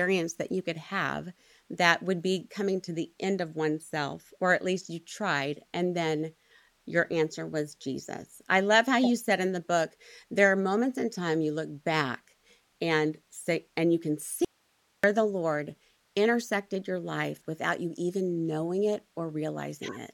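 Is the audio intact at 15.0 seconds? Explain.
No, 15.0 s falls inside an audio dropout to a faint residue from 14.45 to 15.04 s, right after "say and you can". Speech abruptly cuts to hiss about 40 dB down, likely a brief signal loss with the path still live.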